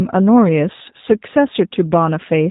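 Throughout the clip the speech has passed through a G.729 codec, a low-rate VoIP coder that rebuilds speech from a vocal tract filter, a pitch predictor and a handful of pulses per frame, a sparse model that fits its 8 kbit/s class. Everything above 4 kHz is gone, so the speech is dull and boxy, and the coarse rebuilding leaves it plainly rough, buzzy and slightly synthetic while staying intelligible.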